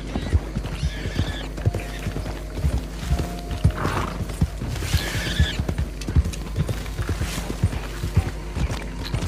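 Mains hum runs through the whole clip, a steady low tone at 50 Hz with some low harmonics above it. Power-line current has leaked into the signal path, likely through a ground loop or a nearby transformer, and the drone sits only about 5 dB below the wanted sound.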